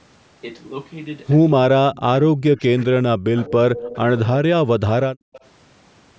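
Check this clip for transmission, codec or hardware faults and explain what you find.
Yes, two faults keep coming back here, and both point to an echo canceller struggling while both sides talk.

Speech suppressed in double talk, at 1.7–3.57, 3.75–3.94, 4.21–4.88 and 5.08–5.44 s: the speech ducks hard, up to roughly 40 dB, likely because the canceller turned down this side's speech along with the echo while both sides were talking.

Echo leak, at 3.76–3.99 and 5.33–5.40 s: a faint copy of the speech trails about 197 ms behind, about 15 and then 25 dB down, likely loudspeaker echo the canceller missed.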